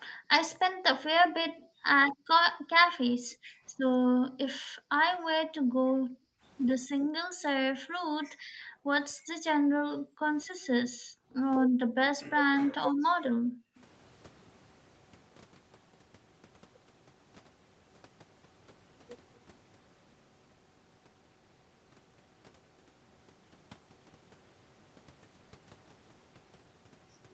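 A speech recording carried over a call path with nothing above 8 kHz, it shows background gated by the echo canceller: the room sound drops by about 40 dB at 0.1–2.7 s, 3.13–3.74 s, 4.08–6.43 s, 7.0–12.01 s and 12.68–13.76 s, as the canceller clamps the microphone while the loudspeaker plays. At 13.76 s a brief, very faint delayed copy of the speech appears, roughly 35 dB down and trailing by 253 ms, likely an echo leak where the canceller let some loudspeaker pickup back through.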